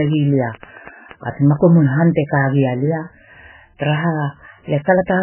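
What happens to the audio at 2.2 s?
At 2.2 s the speech carries heavy MP3 compression damage, present throughout the clip rather than starting there. The encoder, likely starved at a bitrate consistent with about 8 kbps, has cut everything above 3 kHz and discarded weaker frequency lines, which then flicker on and off between frames. The result at that moment is dull, band-limited speech with a watery, swirling texture and smeared consonant onsets.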